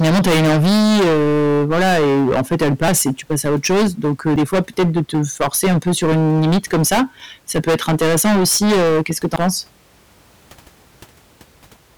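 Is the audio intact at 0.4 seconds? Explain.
No. Hard clipping runs through the whole speech clip, including 0.4 s: the level is pushed about 21 dB past full scale, so nearly a third of samples are sheared flat. The waveform shows squared-off peaks, the spectrogram smeared high harmonics, heard as harsh fuzz.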